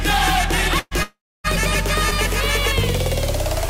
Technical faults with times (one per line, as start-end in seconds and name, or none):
0.79-0.94 burst of packet loss
1.03-1.47 long network dropout